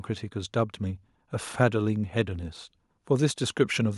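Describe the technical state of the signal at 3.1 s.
At 3.1 s the speech signal is intact, with no audible technical fault at that moment.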